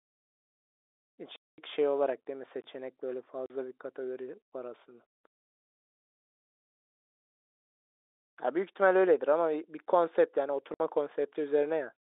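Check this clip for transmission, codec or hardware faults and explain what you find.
Two kinds of transmission fault interrupt the speech, carried over G.711 telephone coding with its narrow 300 Hz to 3.7 kHz line band.

Packet loss filled with silence occurs at 1.36 to 1.58 s, 3.46 to 3.50 s and 10.74 to 10.80 s. Lost packets became silence, leaving 220, 40 and 60 ms holes that fit 20 ms packets. Each hole has hard edges.

A gap between chunks occurs at 2.62 to 2.64 s. It is a 23 ms silent hole at a join between audio chunks, likely from padding or a late chunk start. No sound is lost, but the flow breaks at the join.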